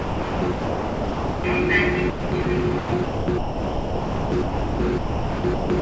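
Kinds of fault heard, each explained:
Sound chopped by the voice detector: From 0.0 to 1.44 s, 2.10 to 2.46 s and 2.78 to 5.82 s, stretches of the sound drop out and a flat, steady hiss takes their place. Roughly 1.3 s, 0.26 s and 2.3 s are replaced. The sender's voice detector likely switched transmission off, and comfort noise filled the gaps. This is unlike a noise gate, which leaves true silence, and unlike packet-loss concealment, which repeats or smears fragments. The sound above 8 kHz is missing throughout, as expected from the G.722 call codec.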